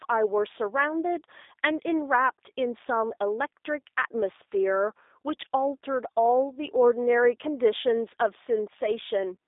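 Speech, carried through a G.729 codec for its whole length. Nothing above 3.8 kHz survives, and the lows thin out below 300 Hz. The voice is rebuilt from a filter, pitch predictor and sparse pulses, so it sounds plainly rough and synthetic, which fits an 8 kbit/s codec.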